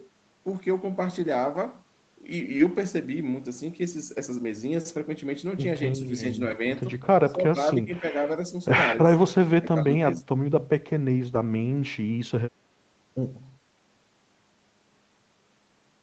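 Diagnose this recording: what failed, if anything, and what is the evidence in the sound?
Network stage, short concealed packet loss: at 2.57 to 2.61 s about 20 ms of audio never arrived, and roughly 15 ms of it was filled by the receiver extending the preceding sound before blending back. It comes through as a brief smear or wobble rather than silence. Unlike a hard dropout, the sound continues through the hole, and a short consonant at that point can simply disappear.

Codec stage, lost packet rebuilt from error correction: single 20 ms packets at 2.59, 6.51 and 11.35 s were replaced by the low-bitrate Opus in-band copy carried in the following packet. There is no gap, only a momentary rougher, noisier texture. That distinguishes it from concealment, which invents sound. Here real but coarser audio plays. At 2.59 s it overlaps the concealed loss, so that moment is doubly degraded.

Call processing stage, speech suppressed in double talk: the level dips by about 20 dB across 7.25 to 8.15 s, for roughly half a second in total, and by about 15 dB at 9.62 to 9.89 s and 10.17 to 10.29 s. 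These dips last hundreds of milliseconds and pump in pieces, unlike 20 ms packet events. The likely cause is the echo canceller mistaking overlapping far-end talk for echo and ducking the talker along with it.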